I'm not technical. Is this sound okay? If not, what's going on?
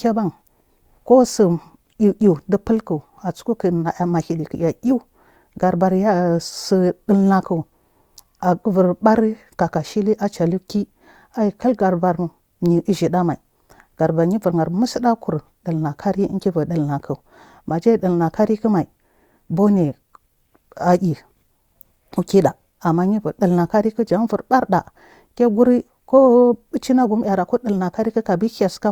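Yes, no faults heard.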